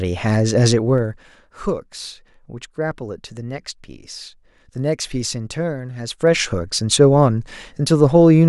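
A gain change applied in unsmoothed 1 dB steps, about twenty a second, produces zipper noise: from 0.85 to 1.32 s the level drops roughly 10 dB with a rapid ticking, and from 6.06 to 6.44 s it climbs back with the same zipping.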